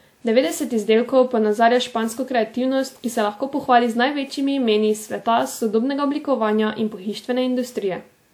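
Throughout the speech, the sound swirls and smears, with a hollow tone and blurred consonant onsets. This points to generation loss, likely from roughly seven passes through a WMA codec at what sounds like 96 kbit/s, each pass requantising on a shifted frame grid. A single low-bitrate encode sounds different: it would narrow the band, whereas here content still reaches 20 kHz while the smearing goes beyond what that rate alone leaves.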